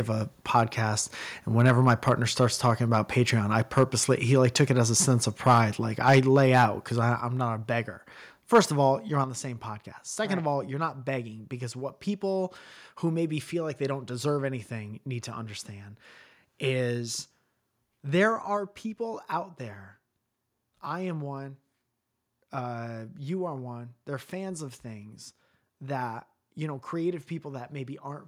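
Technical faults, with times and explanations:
0.56 to 8.60 s (0.56–0.60, 1.67–2.09 just before "starts talking about", 3.77–3.83, 5.46–5.59, 6.06–6.19, 6.55–6.64, 8.54–8.60 s), microphone overload: the loudest speech peaks reach or exceed the converter's ceiling by up to about 5 dB, most likely from an input gain set too high. Their tops are sliced flat, which gives those syllables a harsh, crackling edge. Only a small share of samples is flattened in most bursts, but around a tenth are flattened at 8.54 s.
6.19, 7.2 and 9.24 s, microphone volume stepped down: the whole signal, speech and background alike, drops abruptly in a single step, by about 2 dB at 6.19 s and about 5 dB at 7.2 s (just before "not a beggar") and at 9.24 s (between "of all you're" and "the same podcast"). The first step comes right as the 6.06 s overload ends, and all three follow the clipped peaks. That points to the call software's gain control, which likely cut the microphone's input level after detecting overload.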